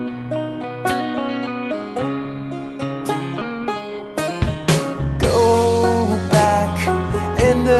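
At 3.41 to 3.43 s the music does a skip ahead: roughly a second of audio just isn't there, and playback jumps straight from one side of the hole to the other with nothing filled in. Packets were probably dropped, either lost in transit or thrown out by an overflowing jitter buffer, while later audio was already queued. So you hear an abrupt splice, as if the track lurched forward, rather than a silence.

Right after, from 3.51 to 4.56 s, there's a jitter buffer speed-up. The buffer was still holding more audio than it wanted, so the receiver kept snipping out short pitch-period-sized slices, about a tenth of a second in total, to pull the delay back down. The music plays about 10% fast with its pitch unchanged, so that passage feels rushed and the tempo loses its steadiness. All of this rides on an Opus call path at 32 kbps, which limits the top end to around 12 kHz.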